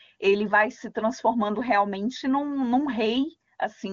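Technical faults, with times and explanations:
No technical faults can be heard in this clip, so there are no times or explanations to give.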